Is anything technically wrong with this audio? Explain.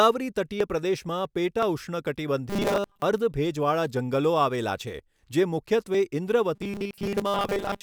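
Yes. The speech has two kinds of fault.

Dropped buffer (overrun) occurs at 0.60 s, 1.63 s, 4.99 s (just after "આવેલા છે") and 5.94 s (just after "આવેલા છે જે"). Each time the speech jumps ahead with no gap. The likely cause is that the software failed to read a buffer before the hardware overwrote it, losing roughly 20 ms of audio and joining the surrounding sound directly.

Robotic sound from repeated short buffers appears from 2.50 to 3.02 s and from 6.55 s to the end. The speech becomes a rigid, metallic buzz at a fixed 200 Hz that still loosely tracks the speech. This likely comes from audio arriving too seldom, so a 5 ms fragment is replayed to fill the gaps. Most of the real signal in those spans is skipped, and the repetition rate sets the buzz pitch.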